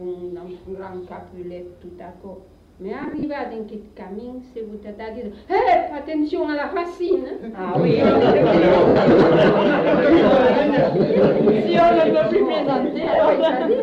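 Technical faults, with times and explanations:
3.03–3.23 s, 8.88–8.96 s, 13.03–13.19 s, lost LE Audio frames: gaps of 100 ms (scattered, longest run about 40 ms), 80 ms, and 90 ms (scattered). The LC3 decoder repeats the last spectrum with random signs and fades it, giving a brief noisy smear.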